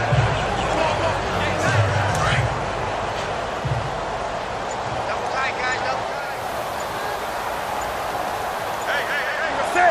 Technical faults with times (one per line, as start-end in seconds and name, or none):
6.00-9.58 digital radio blending to analogue